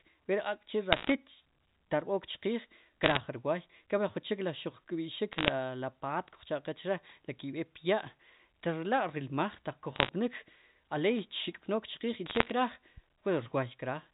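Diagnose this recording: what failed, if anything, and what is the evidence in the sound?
Bit errors on a digital phone line (transmission stage) cause crackling ticks at 0.93–1.12, 3.03–3.20, 5.32–5.52, 9.96–10.09 and 12.26–12.52 s. Each flipped bit corrupts one G.711 sample, so the speech underneath keeps going with no gaps, unlike packet loss.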